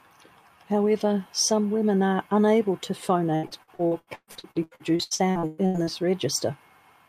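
Right after "women are unable to", from 3.35 to 5.90 s, there's repeated packet loss giving that robotic sound: twenty dropouts, the longest 124 ms, each patched by stretching the previous bit of speech. About 45% of the stretch is concealed, so it turns choppy.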